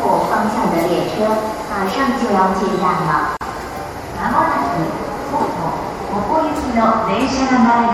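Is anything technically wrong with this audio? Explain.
Yes, two faults are audible.

Throughout, the sound turns watery and swirly, likely from MP3 compression at a low bitrate near 64 kbps. A spectrogram would show flickering holes.

From 3.37 to 3.41 s there is a gap at a join of encoded pieces. Leftover encoder padding leaves a gap of about 41 ms, its edges smeared so the silent part is shorter, before the sound resumes.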